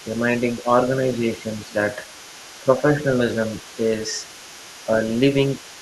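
From the start to the end, the other side's voice leaks through faintly, roughly 25 dB below the speech. An incomplete echo canceller is the likely cause.

Speech is suppressed in double talk at 0.63, 0.92 to 1.45, 1.63 to 1.74, 2.63 to 3.05, 3.76 to 3.84 and 4.86 to 4.92 s. The level dips briefly, by about 5 dB, and closer to 10 dB near 1.7 s. The likely cause is the canceller turning down both voices at once.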